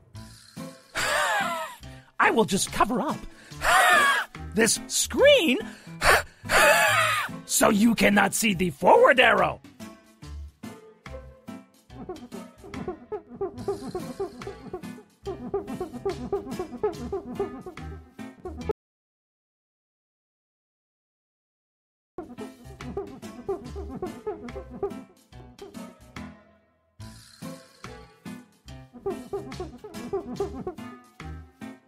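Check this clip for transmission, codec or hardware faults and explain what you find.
One fault is present. Audio dropout to silence, 18.71 s to 22.18 s: the input was likely lost, through a disconnected device, a failed link or a stray mute, while recording carried on writing silence. The sound cuts off abruptly, leaving about 3.47 s of dead silence with no room tone, then resumes mid-flow, with that stretch of audio gone.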